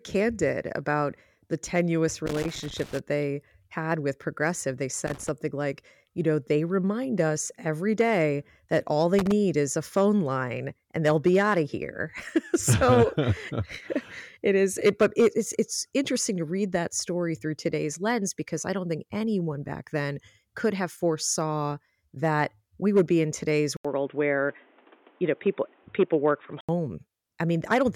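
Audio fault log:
2.26–2.99 s, 5.07–5.29 s (just before "like you know they") and 9.19–9.32 s (between "every day that all" and "is a phone line"): loose connector crackle. Irregular scratchy bursts as a worn or dirty contact rapidly makes and breaks, chopping the signal.
23.77–26.69 s, after "would be in today's": input switched to a poorer device, likely. An 80 ms gap, then the sound turns dull, with nothing above 3.8 kHz. A new noise floor appears around 35 dB below the signal, and loudness stays about the same.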